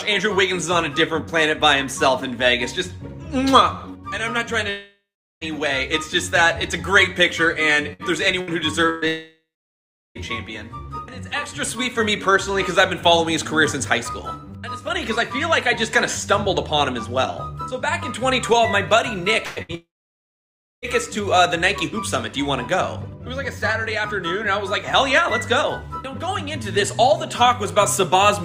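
The audio has three gaps of about 0.7 to 1.1 s, at 4.69–5.44 s, 9.08–10.18 s and 19.75–20.85 s, likely long network dropouts: a fading smear, then up to about a second of flat near-silent waveform. Bursts of packet loss at 7.93, 8.41, 8.89, 19.45 and 19.62 s each drop about 60–120 ms, leaving short held buzzes or fading hisses that show as stretched, decaying horizontal streaks on a spectrogram.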